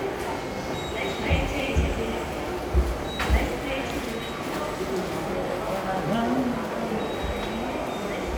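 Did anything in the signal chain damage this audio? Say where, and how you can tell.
Yes. From 1.60 to 7.06 s there's a regular click about every 1.82 s, roughly four in all. That steady period points to clock drift buffer slips at the buffer between devices, likely two free-running clocks about 100 ppm apart, each slip dropping or repeating a few samples.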